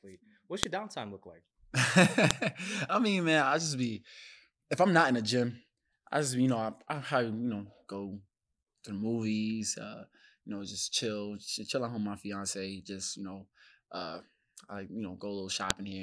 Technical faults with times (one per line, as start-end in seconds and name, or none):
0.63 file header played as audio
2.31 file header played as audio
15.70 file header played as audio